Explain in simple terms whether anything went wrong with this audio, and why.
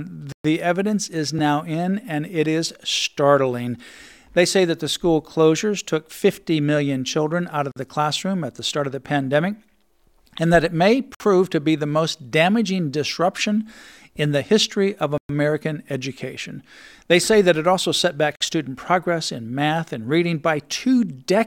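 The speech drops out to silence five times: at 0.32 s for about 122 ms, at 7.72 s for 47 ms, at 11.15 s for 55 ms, at 15.18 s for 115 ms, and at 18.36 s for 52 ms. These are likely Bluetooth stalls. Radio interference held up the packets, the headphones ran out of audio to play, and the sound paused until the delayed data arrived.

There are also two much tinier breaks: at 1.39 s, lasting about 2 ms, and at 7.06 s, lasting under a third of a millisecond. Each is an underrun with held sample. The playback buffer briefly emptied, so the converter simply held its last output value and the waveform went flat for that instant. Nothing was lost, and the sound carries on exactly where it stopped. These come through with little or no click.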